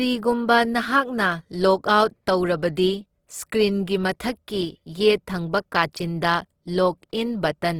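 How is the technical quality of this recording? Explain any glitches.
The technical quality is noticeably compromised by lossy compression throughout the speech.

Opus compression runs from start to finish and is plainly audible. The codec likely behind it splits the signal into bands and, at a low bitrate, preserves each band's energy but fills in the missing detail with folded copies of lower bands or with noise. The bandwidth stays wide, reaching about 20.3 kHz, but tonal parts of the speech come out grainy, rough and hissy. That character points to the music-oriented CELT mode at a low rate, which fits around 16 kbps.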